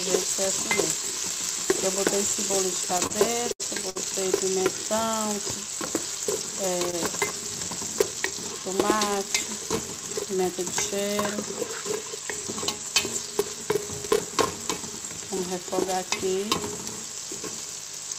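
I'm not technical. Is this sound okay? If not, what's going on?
No. There are two problems. The first is buffer tearing, which runs through the whole clip. The playback side and the hardware reading the audio have drifted out of step, so every short chunk gets a tiny sliver of sound from a few milliseconds earlier spliced in. That causes a steady robotic buzz at about 375 Hz, which fits a 128-sample buffer. You only hear it when there's sound playing.

The second is a short stall from a late packet, four times: 3.07 to 3.12 s, 3.52 to 3.62 s, 3.90 to 3.97 s, and 6.90 to 6.95 s. Each time, a chunk of audio arrived late, so the receiver held the last bit of sound for between 23 and 78 ms and then carried on. Nothing is lost, but you'll hear brief smeared hiccups.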